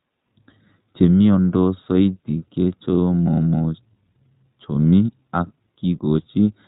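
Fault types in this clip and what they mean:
iLBC codec: narrowband VoIP coding cuts everything above 4 kHz, so the speech sounds plainly rough and a bit synthetic, coded in 20 ms frames.
Lost iLBC frames: at 4.83 s there's a short gap, which fits one lost 20 ms frame, filled by a quick buzzy held-vowel sound before the speech snaps back.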